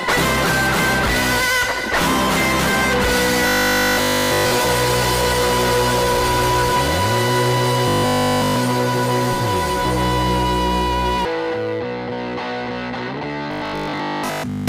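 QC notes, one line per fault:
3.47–4.51 s, 7.88–8.58 s and 13.52–14.68 s, robotic sound from repeated short buffers: a rigid, metallic 50 Hz buzz replaces the sound's natural texture, nearly completely in the first two spans and mostly in the last. The likely cause is a 20 ms slice of audio being looped while incoming material is skipped.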